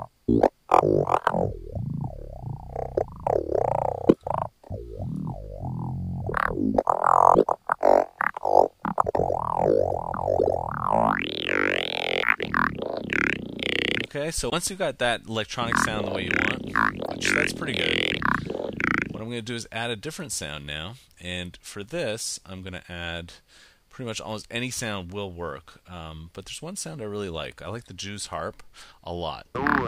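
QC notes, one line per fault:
14.49–14.53 s and 17.05–17.09 s, damaged data in a compressed stream: two short blips, each roughly 40 ms. Bad bytes in the encoded stream mean the decoder misreads those frames and loses sync, spitting out garbage until it locks onto the next good frame header.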